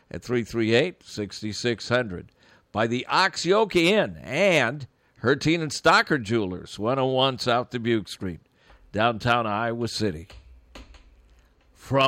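No technical faults can be heard anywhere in the recording.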